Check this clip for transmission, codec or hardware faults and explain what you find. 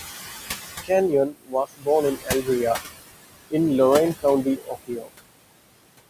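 There are two related faults here, both from the noise suppressor, so the trouble is in the processing chain, not the line or the hardware.

Noise suppressor artifacts run through the whole clip. The suppressor pulls down whatever bands it judges to be steady noise, frame by frame, taking the room noise (which sits about 11 dB under the speech) down by about 19 dB. Because that gain moves with every frame, the residue pumps: the background drops out between phrases and comes back up under the speech.

Speech cut by the noise suppressor happens twice, from 1.1 to 2.49 s and from 4.44 to 5.12 s. In those stretches the suppressor mistook parts of the speech for noise and turned them down along with the background, by as much as about 22 dB. That adds up to roughly 0.7 s of affected sound in the first stretch and about 0.4 s in the second. Softer consonants and word tails sound swallowed or faded, as if the talker briefly dropped away from the mic.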